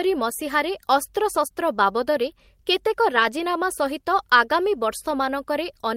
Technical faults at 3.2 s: lost packet rebuilt from error correction

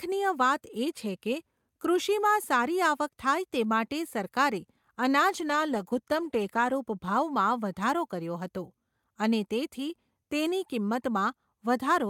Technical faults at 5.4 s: call bitrate drop

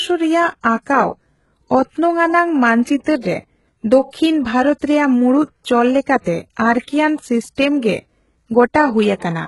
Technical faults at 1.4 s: HE-AAC compression

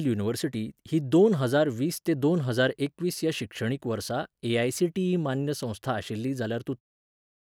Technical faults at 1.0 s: none

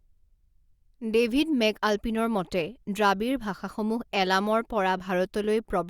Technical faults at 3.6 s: none

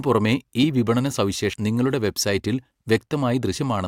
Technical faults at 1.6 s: compressed frames skipped

